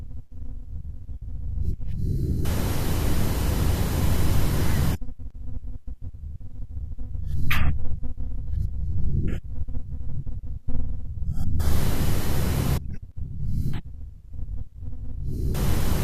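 No technical faults can be heard at any point in this speech recording.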